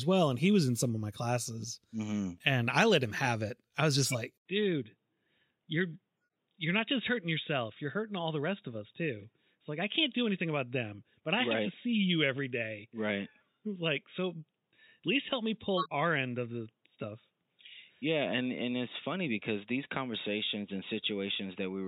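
Damaged compressed data reaches the decoder from 3.98 to 4.15 s. The decoder plays a corrupt frame, about three frames in a row, so misread gains and codes push energy into the wrong frequencies. The result is a brief squeaky burst, peaking around -15 dBFS, that sits on top of the speech for a little over a tenth of a second.

At 4.38 s the input has likely switched to a poorer device. There is a gap of 80 ms, and from then to the end the speech has nothing above 3.8 kHz. The new path's narrow band makes the speech dull and boxy, and it comes in a few decibels quieter. A faint new background noise, roughly 50 dB under the speech, sits beneath it.

A second corrupt frame decoded appears from 15.77 to 15.93 s, again spanning about three frames. It produces the same kind of misplaced-energy blip, a little softer this time at around -20 dBFS, inside the already band-limited sound.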